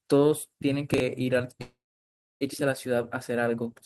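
At 0.94 to 1.00 s there is a brief jumbled stretch: chunks out of order. A 20 ms chunk of the speech plays two chunks late. Nothing is lost, but the misplaced chunk and the reshuffled material around it create three hard joins.

From 1.61 to 2.43 s the speech stops. The last sound carries on briefly as a fading buzz before about 0.65 s of silence. This is a call audio freeze, likely from delayed packets draining the jitter buffer. When the speech resumes it picks up where it stopped, so roughly 0.8 s of gap has been inserted and nothing is missing.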